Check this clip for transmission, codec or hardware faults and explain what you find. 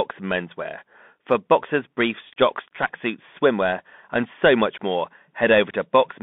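One fault is present for the whole clip: the speech has been carried through a Bluetooth CVSD headset codec. Throughout, the audio occupies only about 200 Hz to 3.6 kHz, which fits a 64 kbps CVSD link. This coder sends one bit per sample saying up or down, with an adapting step size. Loud high-frequency energy outruns that step and distorts, s sounds turn scratchy, and a granular hiss sits under the speech. Plain telephone band-limiting narrows the band the same way but stays smooth and clean.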